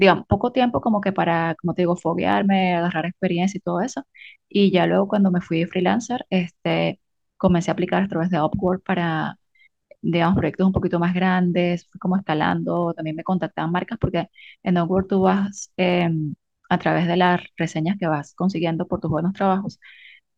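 From 2.24 s to the end, a block size mismatch (truncated) sets in: one stage writes blocks, which fits a 1024-sample size, longer than the next stage reads, so each block's tail is discarded. The speech carries a 46.9 Hz buzz at the block rate and runs at about its normal speed.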